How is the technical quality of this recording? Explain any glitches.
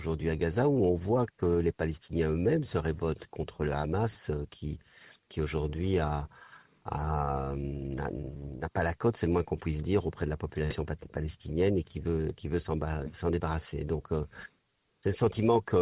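Nothing stood out on listening; no glitches or other technical problems could be heard anywhere in the recording.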